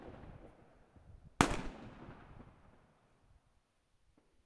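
Nothing stood out on listening to this recording of sounds.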